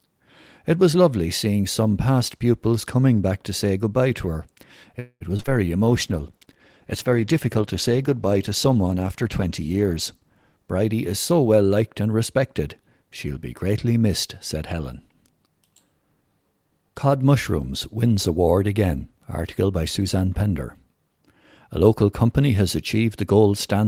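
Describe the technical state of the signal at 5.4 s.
A brief smear and wobble from 5.37 to 5.50 s: short concealed packet loss, where roughly 20, 40 and 20 ms of audio went missing and the receiver bridged each gap by extending the preceding sound, stretching the timing by a few milliseconds.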